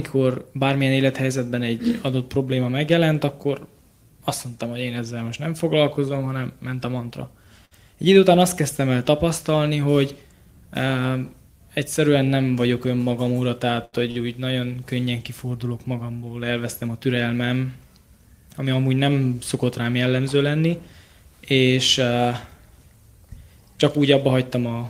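At 7.65 to 7.74 s there's a burst of packet loss: the receiver stretches the last sound for about 56 ms, then jumps ahead, skipping roughly 60 ms of audio. From 13.05 to 14.18 s you get repeated stalls (stutter), three little holds where packets ran late, the longest 77 ms. Nothing's lost, but it drags. Then at 16.09 to 17.25 s the jitter buffer speed-up trims about a tenth of a second of pitch periods, so the audio plays roughly 9% fast at unchanged pitch.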